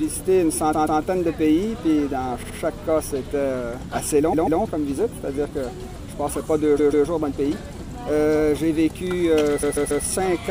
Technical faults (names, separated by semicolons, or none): repeated frames